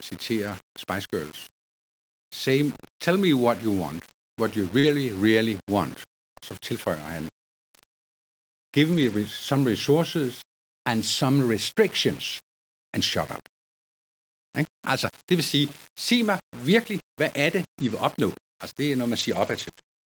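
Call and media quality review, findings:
Low bit depth without dither, whole clip: grainy distortion that tracks the speech level, with quiet tails turning gritty or sputtering between steps. Quantisation error sits about 20 dB below the signal, consistent with rounding to roughly 6 bits; likely a format-conversion stage rounding without dither. Distinguished from codec noise or background hiss by its signal dependence: the grit appears and disappears with the sound rather than sitting as a constant floor.

Lost packet rebuilt from error correction, 0.45–0.55 s: about 60 ms of rougher, noisier speech with no gap, which fits three 20 ms packets decoded from Opus in-band FEC copies. 4.83–4.89 s: about 40 ms, same texture. 8.93–9.15 s, just before "some resources and some": about 120 ms, the longest stretch. Differs from concealment because the underlying speech content continues, only coarser, rather than being smeared or extended.

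Short concealed packet loss, 4.79–4.85 s: about 40 ms never arrived, and roughly 37 ms was synthesised by extrapolating the preceding sound before blending back. Heard as a brief smear or wobble. It runs straight into the 4.83 s FEC rebuild, so concealment hands off to redundant data. Unlike FEC, the speech content itself is guessed, and a short consonant can vanish.

Scattered short gaps, 17.79–20.05 s, after "virkelig hvad er det": about five separate small holes, the longest around 20 ms. Roughly 70 ms was concealed in total, about 3% of the span, alongside FEC rebuilds. Heard as isolated ticks and hiccups in otherwise clear audio. Points to jitter-buffer underruns or sporadic network loss. The single-event faults above produce one disturbance each; these recur in a cluster.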